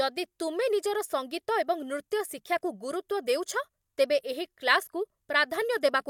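Speech recording with no audible technical faults.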